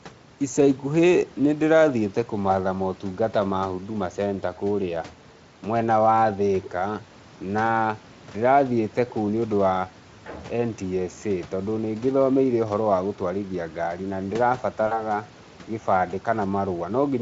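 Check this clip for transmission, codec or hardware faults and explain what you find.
One transmission fault stands out. From 14.87 to 15.03 s the speech briefly smears into a buzzy tone or coloured noise that fades, and stays weak for a moment afterward. This is VoIP packet loss concealed by the speech codec. About 40 ms of audio went missing, which fits two lost 20 ms frames. The decoder filled the gap by extending its last pitch and spectral shape at falling gain, and the recovery lagged because each frame depends on the previous one. Around it, the Speex coding sounds only lightly marked, and the room noise sits about 26 dB below the speech.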